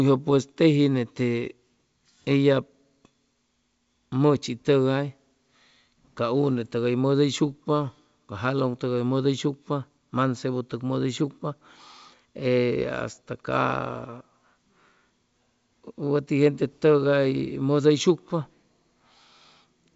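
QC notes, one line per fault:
Nothing to flag here: the speech comes over G.722 wideband telephone coding at 64 kbit/s, and its faint upper-band hiss is just how that coding sounds.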